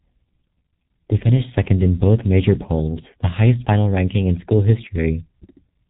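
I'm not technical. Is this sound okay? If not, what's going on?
No. G.723.1 codec, throughout: this old phone-call compression removes everything above about 3.8 kHz, so the speech sounds muffled and hoarse, with smeared consonants. Dropped samples, at 4.96 s: a sharp click, likely because a sliver of audio under a millisecond went missing, making the sound jump abruptly.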